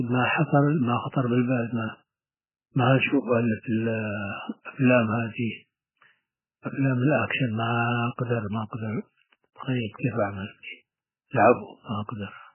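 From start to finish the speech carries heavy MP3 compression damage, likely from encoding at a very low bitrate, consistent with roughly 8 kbps. Nothing survives above 3 kHz, so sibilants go dull and muffled, while the remaining band sounds watery and swirly as weak frequency lines drop in and out between frames. On a spectrogram this shows as a hard flat ceiling at 3 kHz with patchy, flickering energy below it.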